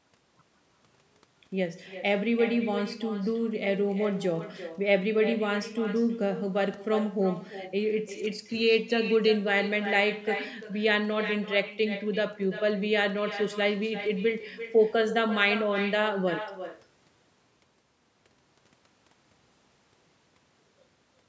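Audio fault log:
Throughout: echo with no canceller. The far-end loudspeaker feeds back into its microphone uncancelled, so each phrase returns about a third of a second later, roughly 11 dB quieter and thinner.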